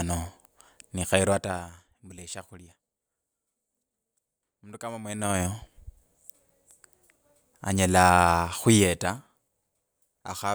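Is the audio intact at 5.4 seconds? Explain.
No. A ticking, zipping texture rides on the speech from 5.02 to 5.48 s: zipper noise, from a roughly 20 dB level change applied in unsmoothed 2 dB steps, about twenty per second.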